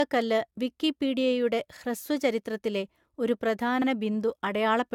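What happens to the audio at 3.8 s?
Just after "ഹ്രസ്വ ചരിത്രത്തിലെ ഒരു പ്രധാന", from 3.82 to 3.87 s, there are overlapping chunks. The next 2-second chunk begins before the previous one finished, so a 50 ms slice plays twice and produces a brief click or stutter at the join. On a waveform the same short shape appears twice in a row, with a jump in level where they meet. A spectrogram shows a thin vertical line at the seam.

That moment, like the rest of the clip, also sounds swirly, smeared and hollow, with softened attacks and nothing above 17 kHz. This is likely generation loss from AAC-LC at 96 kbit/s applied a few times over. A spectrogram shows a hard ceiling at 17 kHz.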